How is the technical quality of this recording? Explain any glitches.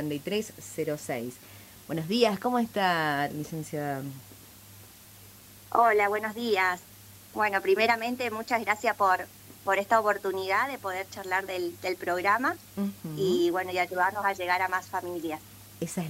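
The recording has one fault, a switching supply whistle, present throughout. A switching power supply is cycling at an audible rate, producing a thin high whistle that wanders between about 11.4 and 11.9 kHz, sitting roughly 30 dB below the main audio.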